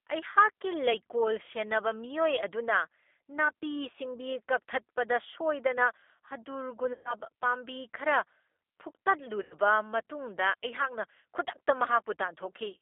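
The whole recording has passed through a G.729 codec. It rebuilds speech from a vocal-tract filter, a pitch predictor and a handful of pulses per frame, and the coarseness fits an 8 kbit/s G.729A link. Nothing is left below about 300 Hz or above about 3.5 kHz, so the speech sounds narrow and telephone-like, with a plainly audible rough, synthetic grain over every syllable.

VoIP packet loss concealed by the speech codec follows at 6.93 to 7.14 s, when about 120 ms of audio never arrived. This fits roughly six lost packets. The decoder filled the gap by repeating its last pitch and filter settings at falling gain, so the sound smears into a fading buzzy tone or coloured noise. At 9.43 to 9.54 s a shorter loss of about 80 ms does the same, and in both places the speech stays weak and distorted briefly after the stream resumes.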